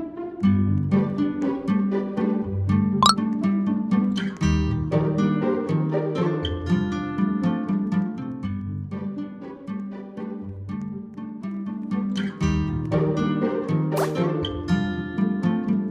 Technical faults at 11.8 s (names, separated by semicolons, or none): zipper noise